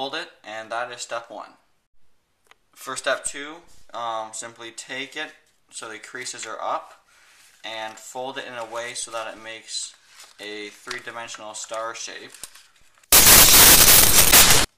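From 13.12 to 14.64 s, samples built from the wrong bytes turn the audio into loud, harsh broadband noise. Misassembled bytes push the noisy low bits into each value's large part.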